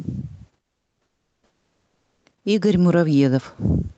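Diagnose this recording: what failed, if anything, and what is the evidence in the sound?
From 0.61 to 2.25 s the real room background vanishes into a steady, featureless hiss about 8 dB quieter. This is comfort noise in place of the background, likely from Opus discontinuous transmission: the sender stopped coding during the pause, and the receiver synthesised noise instead.

Between 2.43 and 3.91 s the speech and its background swell together by about 3 dB over roughly a second and a half. That is automatic gain rising in the call processing stage, where the controller judged the input too quiet and slowly raised its gain.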